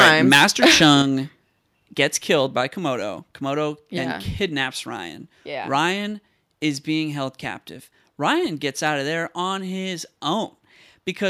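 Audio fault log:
0.00–0.98 s, microphone overload: The loudest syllables carry a harsh, crackling edge, with peaks pushing about 7 dB past full scale and a few percent of samples flattened. The likely cause is an input level set too high, so the converter chops off the waveform tops.
1.02 s, microphone volume stepped down: Voice and background drop together by about 5 dB in one abrupt step, right after the distorted opening. This is likely the call software reacting to the clipping by cutting the microphone's input volume in a single move.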